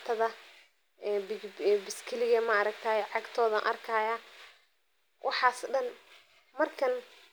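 No technical faults can be heard anywhere in the recording. Nothing in it needs a timestamp or a fix.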